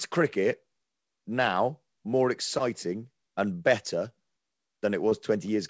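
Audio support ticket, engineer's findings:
Short concealed packet loss at 2.58 to 2.61 s and again at 5.09 to 5.13 s. Brief smear or wobble in the speech; a short consonant may drop out. Each gap fits one lost 20 ms packet. The jitter buffer/decoder concealment extrapolated the previous sound for roughly 15 to 19 ms, then cross-faded back. On the spectrogram: a short stretch of smeared harmonics or flat noise. On the waveform: repeated-looking cycles. G.722 path at 64 kbps, band-limited at 8 kHz.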